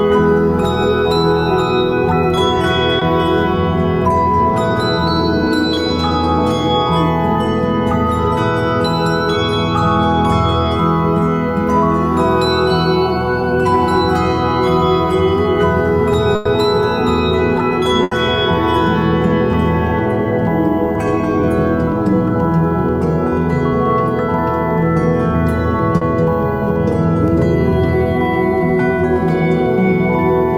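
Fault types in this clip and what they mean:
Short concealed packet loss at 2.99 s and 25.97 s: a small run of audio, about 20 ms at the first point and 40 ms at the second, never arrived at the decoder in time. The receiver covered each hole by extending the sound just before it, pitched or noise-like to match, then crossfaded into the real signal. Each shows up as a brief smear or wobble.
Burst of packet loss at 16.35 s and 18.03 s: here a longer stretch failed to arrive, about 100 ms at the first event and 80 ms at the second, too much for a seamless patch. The receiver kept extending the last sound while fading it down, which gives a held buzz if the sound was tonal or a dying hiss if it was not. The audio then resumes further along, and whatever fell inside the gap is missing.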